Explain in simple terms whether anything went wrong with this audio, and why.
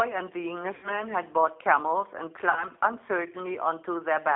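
The speech went through a G.729 codec, a low-rate phone compressor that rebuilds the voice from a simple model, so it sounds rough, synthetic and muffled, with nothing above 3.5 kHz.

VoIP packet loss, concealed by the speech codec, happened twice. Chunks of about 80 ms and 60 ms never arrived, and the decoder filled each gap by stretching out the last sound it had. The first gap, from 0.75 to 1.0 s, and the second, from 2.50 to 2.64 s, turn into a fading buzz or noise, with the voice staying weak for a moment afterwards.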